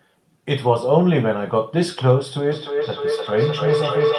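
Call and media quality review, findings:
Feedback howl, 2.51 s to end of clip: tone near 500 Hz swelling to about speech level, loop repeat roughly every 0.3 s. Probable acoustic loop between two co-located call endpoints; mic-to-speaker gain exceeds unity, so each pass grows.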